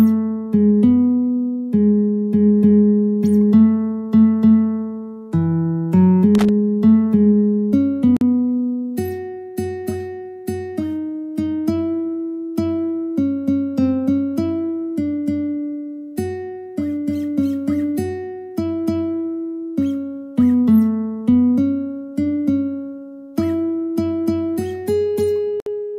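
A short irregular burst of scratchy crackle runs from 6.35 to 6.49 s. This is loose connector crackle: a worn or dirty contact kept breaking and remaking as it shifted, chopping the signal into fragments and adding pops from whatever DC sat on the line.

At 8.17 s the sound abruptly drops out for about 46 ms and then resumes exactly where it stopped. At 25.60 s the same thing happens for about 62 ms. Both are gaps at a join of encoded pieces. The sections were encoded separately and then butted together untrimmed, so each encoder's start-up delay and final-frame padding left silence at the seam, its edges smeared by the codec.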